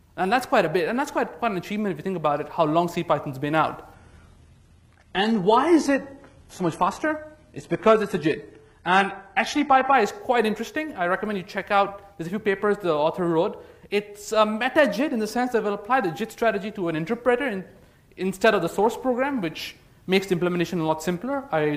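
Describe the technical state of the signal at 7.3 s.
At 7.3 s the audio sits inside an adaptive stream at a lower bitrate, running from 3.94 to 9.94 s. The sudden, gapless quality drop points to a switch to a low-rate HE-AAC rendition: treble drops away, and a spectrogram shows nothing above 11.8 kHz.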